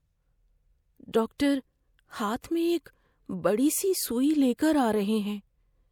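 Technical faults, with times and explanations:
1.38 s pre-echo: a 17 ms hiss precedes a speech attack, as block-wide codec noise fills the quiet lead-in; the spectrogram shows broadband smear just before the onset.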